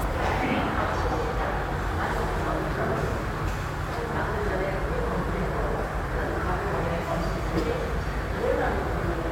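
Nothing technical stands out in this recording of sounds; there's no fault to point to anywhere in it.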